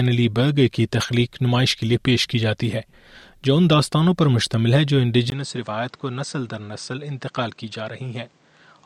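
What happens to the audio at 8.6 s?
At 8.6 s the sound is still inside a stretch running from 5.3 s to the end, after a brief gap of about 20 ms. It becomes duller, with nothing above 8.8 kHz, roughly 10 dB quieter, with new background noise. That points to a likely input switched to a poorer device. A plain bandwidth drop would keep the same level and noise.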